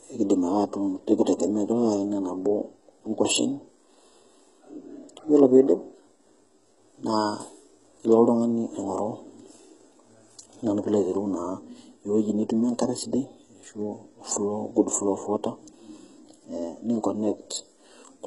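A very low-bitrate HE-AAC encode is the likely cause of what goes wrong in this speech clip. The coder appears to keep only the lower band and synthesise everything above it from copied lower bands, which fits a rate near 12 kbps, and damage is heavy throughout. Nothing survives above about 11.1 kHz, and the rebuilt treble sounds false: harmonics fail to align across the crossover, so s sounds come out gritty, metallic or lispy.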